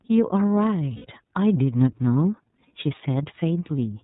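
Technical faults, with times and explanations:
Throughout: iLBC codec. Nothing passes above 4 kHz, so a spectrogram shows a hard ceiling there. The codec damage is plainly audible as a rough, synthetic edge on the speech, consistent with iLBC's 30 ms frame mode at about 13.3 kbps.
0.96–1.06 s: lost iLBC frames. For about 90 ms, which fits three lost 30 ms frames, the decoder repeats the last pitch cycle mixed with noise, heard as a held, buzzy vowel. The waveform shows evenly repeating periods, and the spectrogram shows flat, smeared harmonics before the speech resumes almost at once.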